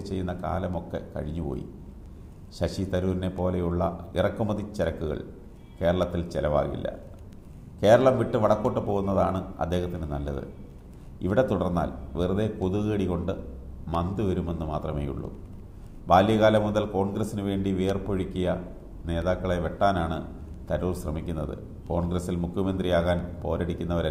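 Nothing in the recording stood out as a technical fault on listening.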